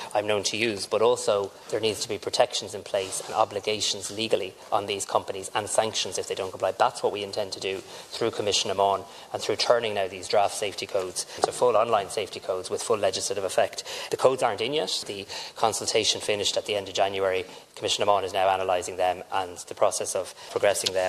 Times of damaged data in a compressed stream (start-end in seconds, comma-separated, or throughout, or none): none